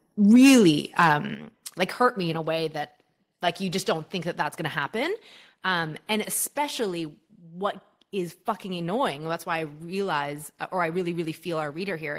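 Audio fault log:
1.35 s, microphone volume stepped down: the speech and background drop together by about 7 dB in one step, likely from call software lowering the input gain.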